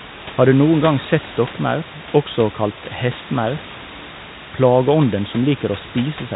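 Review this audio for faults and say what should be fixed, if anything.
Nothing here needs fixing: the speech sits about 13 dB above the background noise of the room, and the band ends near 3.8 kHz, which is what ordinary fixed-line telephone coding such as 64 kbit/s G.711 A-law produces, with any quantisation noise no more than faint.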